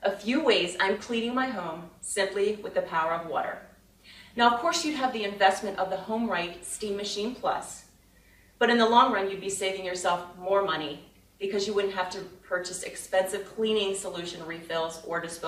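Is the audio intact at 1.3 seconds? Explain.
Yes, the audio is intact at 1.3 seconds, with no fault audible at that moment.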